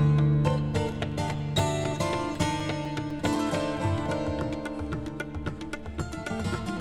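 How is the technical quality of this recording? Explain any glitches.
There's one clear problem: CD scratch ticks from 1.34 to 3.86 s, eleven short clicks about four a second. A scratch defeats error correction each revolution, so the player patches a few milliseconds, of uneven strength.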